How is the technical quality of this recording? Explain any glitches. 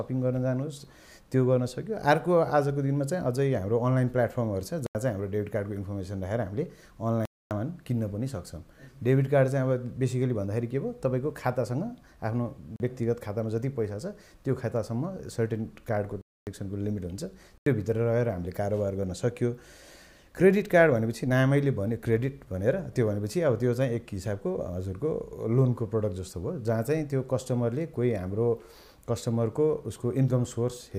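The recording has five dropouts. Blocks of digital silence occur at 4.86 s (85 ms), 7.25 s (256 ms), 12.76 s (38 ms), 16.21 s (256 ms) and 17.58 s (85 ms). In each, the output buffer likely went unfilled and the samples became zeros, heard as hard-edged holes. The 85 ms gaps fit a 4096-sample buffer.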